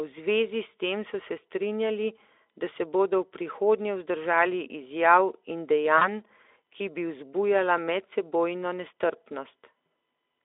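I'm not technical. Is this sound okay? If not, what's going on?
No. At 5.97 to 6.07 s, just after "prihodnje vzdržali izjav in", about 40 ms of sound went missing. This is VoIP packet loss concealed by the speech codec. The decoder guessed the gap from the preceding sound, so it is briefly stretched into a buzzy tone or a coloured noise that fades before recovering.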